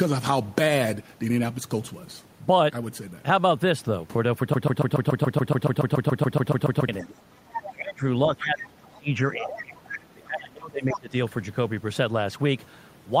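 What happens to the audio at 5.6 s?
At 5.6 s the speech is caught in a broken-record loop. It runs from 4.54 to 6.89 s. A fragment about 0.14 s long plays 17 times back to back, with no gap between repeats. It sounds like a rapid, identical stutter. The most likely cause is a stalled player, encoder or stream that kept re-sending the last piece it held. Whatever speech belonged in those two seconds is gone.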